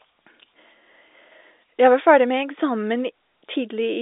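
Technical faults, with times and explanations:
No technical faults turn up in this speech, which carries the narrow band of G.711 A-law telephone coding at 64 kbps, with the line passing 300 Hz to 3.7 kHz and nothing above 3.8 kHz.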